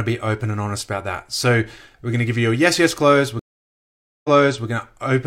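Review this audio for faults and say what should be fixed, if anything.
Right after "you a yes yes", there's a stream reconnect from 3.39 to 4.66 s. The connection dropped, leaving about 0.85 s of silence, then a fresh decoder picked up mid-stream, and playback resumes 0.42 s earlier than where it cut, so you hear a short stretch twice. Worth fixing with a bigger network buffer and a reconnect that resumes from the exact byte or timestamp where it dropped.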